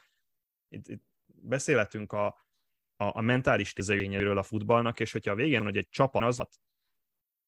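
At 3.8 to 4.2 s and 5.6 to 6.4 s, chunks out of order: a 200 ms block plays one, then three chunks late, jumbling the speech.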